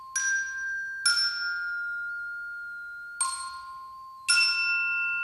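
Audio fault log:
Throughout: switching supply whistle. A thin, high whistle sits around 4 kHz, wandering between about 3.9 and 4.7 kHz. It stays well under the sound, at roughly 35 dB below it. A switching power supply is running in an audible burst mode or beating with another one, and its pitch drifts with load.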